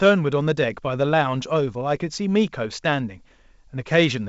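Speech over G.722 wideband coding, with nothing technically wrong.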